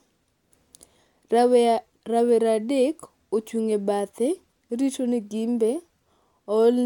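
No technical faults turn up anywhere in this speech recording. There is nothing here that calls for a time stamp or an explanation.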